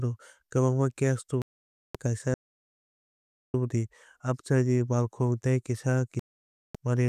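At 1.42 s the speech mutes until 1.95 s, a digital broadcast dropout lasting about 0.53 s, which fits a run of roughly two dozen frames failing their checks while the receiver held its output silent. It recurs from 6.19 to 6.75 s, about 0.55 s. Both holes are short and end when valid frames arrive again.

Between 2.34 and 3.54 s comes a longer audio dropout to silence of about 1.2 s. The gap is silent with the room tone gone too, and the sound breaks off and resumes mid-flow, likely because the input link was lost while recording continued.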